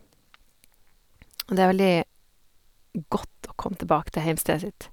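Nothing in this bit of speech jumps out as a technical fault, so there's nothing to flag here.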